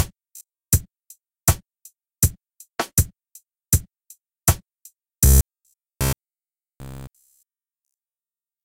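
Robotic sound from repeated short buffers at 0.37 to 0.73 s and 5.26 s to the end: a rigid 66.8 Hz metallic buzz, likely from a roughly 15 ms buffer replayed in place of missing audio. It covers most of the first stretch and all of the second.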